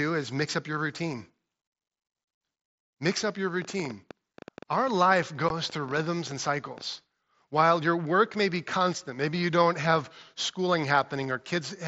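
Right after "up your", at 3.62 s, a ticking of sharp, similar pops starts over the speech and keeps going through the pauses until 6.82 s. The clicks arrive unevenly, about 8 per second, roughly thirty in all, with peaks a few decibels above the speech. This is a train of clicks, likely from electrical interference from nearby equipment or a faulty connection or power supply injecting the same pulse again and again.

Within that stretch come two abrupt holes in the speech, at 4.33 s and 5.49 s. The first is 7.5 ms long and the second 15 ms, each with a hard edge. This is unconcealed Bluetooth headset packet loss. Voice packets between headset and phone went missing, and silence or an idle pattern took their place instead of any patching. The lengths fit one lost packet and then two in a row. The wideband mSBC headset link carries the speech up to 8 kHz with a light graininess on louder sounds.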